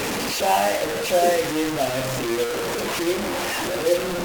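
Grainy distortion follows the speech throughout, nearly as loud as it. Quiet parts sputter out. Likely cause: low bit depth without dither, fitting 3-bit truncation.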